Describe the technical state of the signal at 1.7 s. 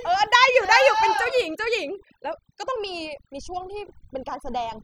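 At 1.7 s the speech carries overdone noise removal, which runs through the whole clip rather than starting or stopping here. The noise reduction is set far too hard. Frequency bands that sit close to its noise estimate get pushed down or cut out entirely. Quiet parts of the voice fall into those bands and vanish with the noise. The background drops and breaks up into twinkling specks.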